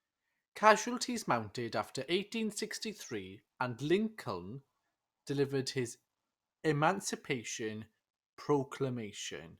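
No technical faults can be heard anywhere in this speech recording. There is nothing to place on a timeline, since no event at any point stands out as a fault.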